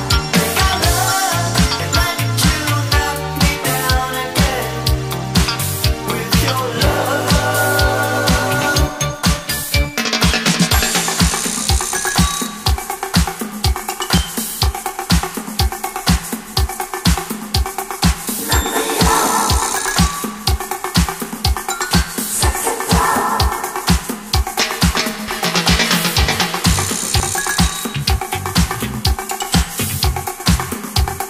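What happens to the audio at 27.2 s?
At 27.2 s the audio skips ahead: roughly 40 ms of sound is missing and the material on either side is butted straight together. This is most likely a dropped buffer (overrun), where incoming samples were overwritten before the software collected them. What separates it from a dropout is that no silence is inserted. The timeline simply jumps, so there is an abrupt discontinuity in the sound rather than a brief gap.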